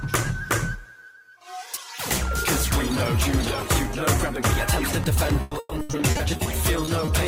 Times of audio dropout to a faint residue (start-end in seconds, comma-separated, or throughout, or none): none